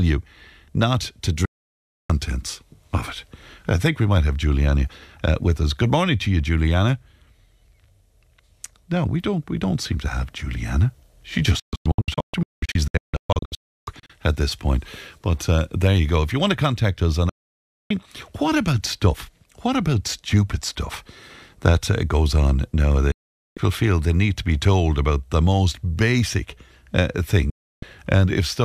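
Speech with digital broadcast dropout. The receiver lost valid frames and muted, each cut fading in about 3 ms. Silences fall at 1.45–2.10 s, 11.60–14.10 s (scattered short holes, longest 320 ms), 17.29–17.91 s, 23.12–23.57 s and 27.50–27.83 s. The programme in those gaps is lost.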